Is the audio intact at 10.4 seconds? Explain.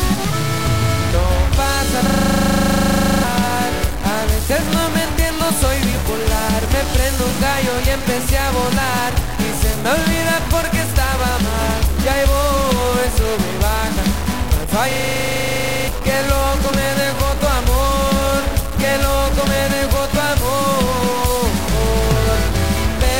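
No, at 10.4 seconds you get the same distortion that runs through the whole clip, with even the quiet stretches hissing with noise. It sounds like a stuck bit, likely one data bit pinned at 0 or 1, knocking about half the samples off by that bit's value.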